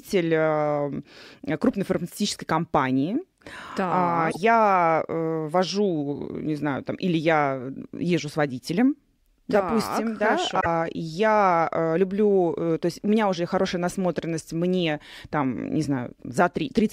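At 4.27 s and again at 10.57 s, each about 0.1 s long, damaged data in a compressed stream makes the decoder lose sync and resync at the next frame, unlike a plain dropout's clean gap.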